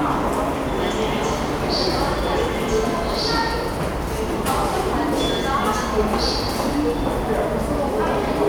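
The clip is a recording of sounds, and nothing is technically wrong with it.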